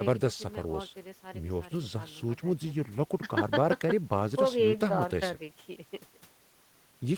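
Nothing goes wrong anywhere in this speech recording, so there's no technical fault to point to.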